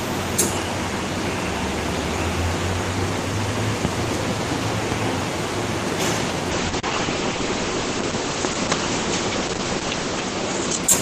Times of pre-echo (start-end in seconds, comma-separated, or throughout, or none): none